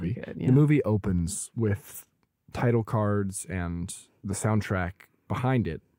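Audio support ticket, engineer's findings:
No fault found on this speech clip; nothing to log against any component.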